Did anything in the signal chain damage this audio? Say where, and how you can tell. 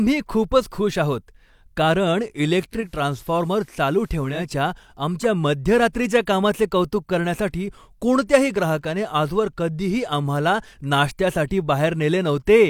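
Yes, at the radio receiver. From 2.68 to 4.56 s, just after "खूपच खुश आहोत कारण", faint hiss rises roughly 35 dB below the speech and the level falls about 2 dB. Each change eases in over 0.38 s before clearing by "आमच्या मध्यरात्रीच्या कामाचे कौतुक". This is digital radio blending to analogue: the hybrid receiver lost its digital stream, cross-faded to the station's FM broadcast with its hiss and band limit, then returned.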